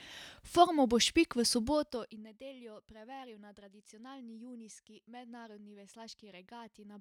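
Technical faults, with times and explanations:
1.6–2.31 s, zipper noise: fast ticking rides on the speech as the level falls about 20 dB just before "nedeljo preveril na tradicionalni". The drop moves in unsmoothed steps, roughly 70 a second, and each step clicks.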